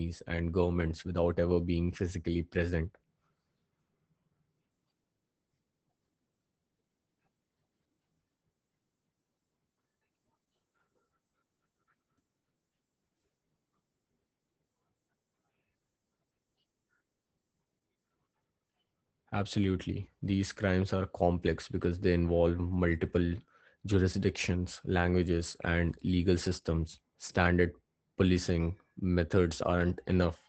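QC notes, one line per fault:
Throughout: Opus voice compression. The speech has the muffled, slightly hoarse and robotic edge of Opus running its SILK linear-prediction coder hard, with the top end gone above about 8 kHz, so sibilants lose their air. The damage is plainly audible, and the coarse texture suggests a bitrate around 12 kbps. At that rate the excitation signal gets coded roughly, which is where the grainy, buzzy quality on the voice comes from.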